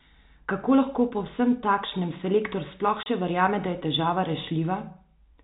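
At 3.03 s, packet loss filled with silence cuts a 30 ms hole in the speech, consistent with one lost packet, with abrupt edges, over the band-limited G.711 telephone sound.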